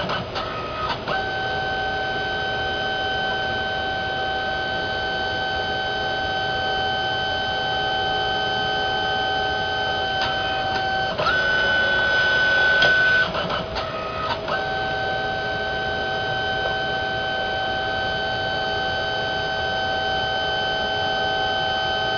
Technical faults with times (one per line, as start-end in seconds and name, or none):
0.00-22.18 aliasing